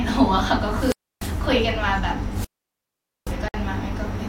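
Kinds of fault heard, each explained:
Wireless microphone squelch dropout: Hiss swells, then the speech falls into near silence, once from 0.61 to 1.51 s with a mute of about 296 ms and again from 2.31 to 3.37 s with a mute of about 824 ms. The FM radio signal faded far enough that the receiver's squelch shut the output.
Gap at a join of encoded pieces: At 3.48 s a 57 ms hole of silence cuts into continuous speech, its edges smeared, before the sound carries on where it stopped. Separately encoded pieces were joined with their start delay and end padding left in.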